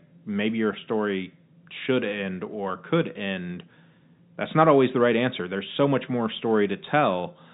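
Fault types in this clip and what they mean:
Listening through this speech recording, nothing stood out as a fault.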